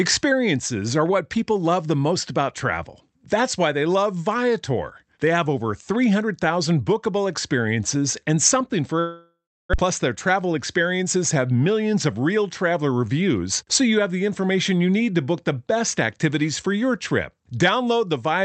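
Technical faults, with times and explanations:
8.99 to 9.84 s, long network dropout: the sound stretches into a buzzy, repeating continuation of its last fragment that fades over several tenths of a second, then sits in about a third of a second of near-silence before resuming, with roughly 600 ms of the original never heard. The likely cause is a run of lost packets that the receiver covered by extending the last sound, and the playout delay shifts by about a tenth of a second. On a spectrogram, a smeared harmonic band fades into a dark gap. The waveform shrinks to almost flat.
10.29 to 11.16 s, jitter buffer speed-up: the speech runs about 8% fast with its pitch unchanged, so it sounds slightly hurried. After the gap, the receiver's buffer held more audio than its target, and it drained the excess by repeatedly cutting out pieces of one or a few pitch periods, about 70 ms in total. On a spectrogram, the harmonics stay at the same frequencies while the syllables are compressed in time. 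The waveform shows small splices at pitch-period boundaries.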